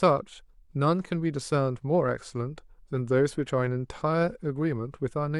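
No dropouts, clipping, glitches or other technical faults turn up anywhere in the recording.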